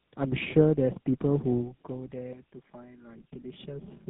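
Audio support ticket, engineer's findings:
Tandem speech coding, whole clip. Speech rough, muffled, warbly. Nothing above 3.8 kHz. Two speech codecs in series, with the sound pointing to a GSM full-rate leg last. Each stage re-encodes the previous decoder's damage, so the artefacts stack.

Channel delay (comb filtering), 2.33 s to end. Hollow, phasey tone. Fixed notches from around 100 Hz upward. One channel lags by about 5 ms before the mono sum. Shared content cancels at evenly spaced frequencies. Check the downmix path.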